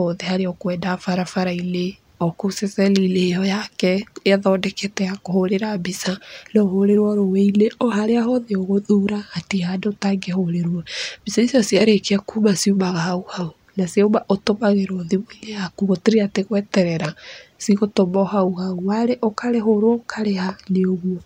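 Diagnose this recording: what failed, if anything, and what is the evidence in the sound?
The converter stage failed with sample clock jitter. From 0.54 s to 7.59 s the speech carries a fine hiss and roughness that swells on louder, brighter sounds and drops away in the pauses. It clears just before "oharĩa hothe ũgũthura". The sampling clock is wandering by a couple of microseconds. Each sample lands slightly off time, and steep waveform slopes turn that timing error into noise roughly 40 dB below the speech.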